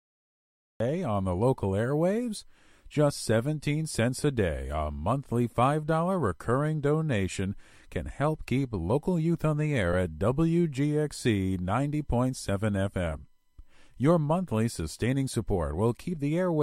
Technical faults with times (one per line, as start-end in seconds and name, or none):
0.00-0.80 cut-off start
7.32 lost LE Audio frames
9.93 lost LE Audio frames